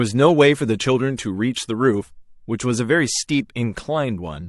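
A speech recording in which a transform codec, apparently holding a long block of about 36 ms with no switch to short blocks, spread quantisation noise ahead of a sharp attack, producing pre-echo at 1.17 s: a hiss roughly 19 dB up, smearing about 16 ms before the onset.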